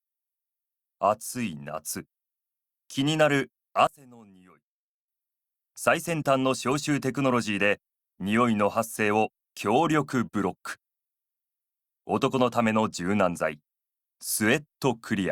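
From 3.87 to 5.08 s the sound collapses to a faint residue, about 24 dB quieter, before returning at full level. The likely cause is one channel inverted: with one stereo side's polarity reversed, everything shared by both channels cancels in a mono sum, and only their small differences survive. On a waveform this appears as a sudden narrow band between two full-height sections; a spectrogram shows everything much fainter for that stretch.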